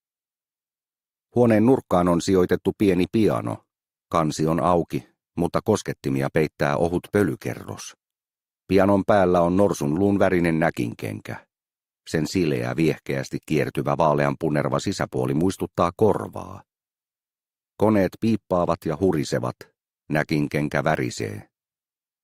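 No technical fault can be heard anywhere in this audio. The sound runs without interruption or audible damage from beginning to end.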